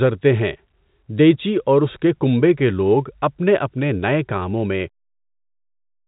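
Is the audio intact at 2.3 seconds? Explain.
Yes, the audio is intact at 2.3 seconds, with no fault at that moment.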